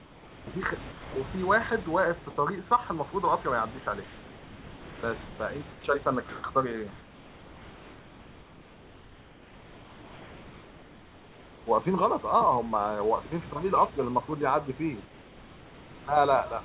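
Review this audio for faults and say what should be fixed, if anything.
Comfort noise in place of the background appears at 0.0–0.47 s, 4.04–5.39 s, 5.72–5.84 s, 6.29–6.44 s, 6.92–11.66 s and 15.05–16.07 s. The real room background in the pauses gives way to a steady, featureless hiss. It sits about 2 to 6 dB quieter in most gaps but about 4 dB louder at 6.29 s. The likely cause is discontinuous transmission: the sender stops sending during pauses and the receiver synthesises noise in their place. The longest stretch runs nearly 5 s.

Sound dropped by the voice detector occurs at 0.92–1.16 s. About 150 ms of speech is missing and steady noise fills a 240 ms gap until the sound resumes. Most likely the voice detector misread the sound as background and stopped sending. The receiver then played comfort noise over it. The audio above 4 kHz is absent throughout, as expected from the G.711 path.

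To prevent both, disable discontinuous transmission or raise the voice detector's sensitivity and hangover time so quiet passages and pauses are sent as real audio.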